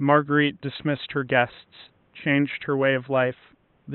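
No technical faults are audible in the speech, and the only background is the room's own ambient noise sitting about 42 dB below the speech.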